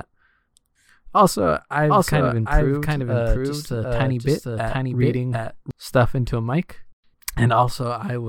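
A doubled audio track runs from 1.81 to 5.71 s in this speech recording, ending just before "stuff into a mic". A dry, full-band copy trails roughly 0.7 s behind at about equal level, starting and stopping abruptly, likely from a second, slower capture path or misaligned edit.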